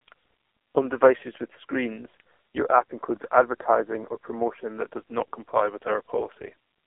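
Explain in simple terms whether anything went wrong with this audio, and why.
The whole clip went through the AMR narrowband mobile codec at a very low data rate. Everything above about 3.5 kHz is lost, and the speech sounds buzzy and synthetic.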